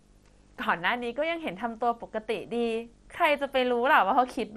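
Right from the start and all the way through, there's video or display buzz riding under the speech. It's a steady 50 Hz buzz, the picture's field rate, with a fizzy hash on top, plus a thin whine up at 15.6 kHz from the line scan. Some screen or video cable has coupled into the audio path. It sits roughly 35 dB below the speech, so it's quiet.

Also running the whole length, the speech sounds dull and gurgly, with a granular, watery texture on the consonants and vowels. Nothing comes through above 13.6 kHz. That's likely MP2 compression starved of bits. The codec splits the sound into 32 sub-bands, and at this rate it shuts off the upper ones and coarsely quantises the rest, so bands flicker in and out. That fits something around 64 kbps.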